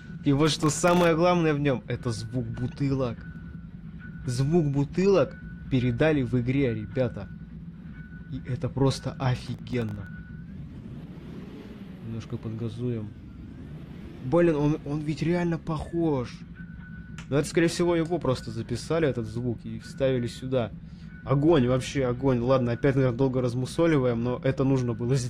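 From 0.47 to 1.07 s, and again from 9.36 to 10.07 s, processor overload crackle tears through the audio. The processor repeatedly misses its buffer deadlines, and each miss drops a sub-millisecond slice to silence, which fits very small buffers of under a millisecond. The first burst packs in dozens of these gaps and the second a dozen or so, heard as gritty crackle. A single dropout would leave one clean hole, and clipping would track loud peaks.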